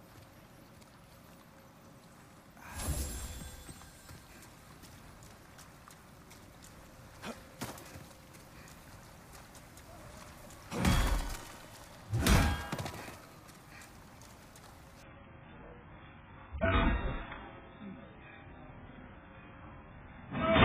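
At 15.03 s the quality falls off a cliff and stays down until the end at 20.64 s, which is the adaptive stream switching to a lower bitrate because the connection couldn't keep up. There's no gap, just an instant swap: everything above about 3.7 kHz vanishes, the sound turns dull and smeared, and codec artefacts crowd in. The step down sounds like a jump from a comfortable AAC rate to something as starved as 8 kbit/s.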